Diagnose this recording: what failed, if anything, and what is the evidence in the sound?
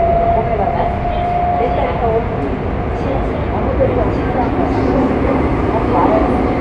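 Nothing failed, and the sound gives no evidence of any fault in the recording.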